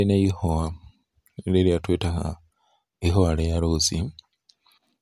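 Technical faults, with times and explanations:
Nothing in this speech recording stood out as a technical problem on listening.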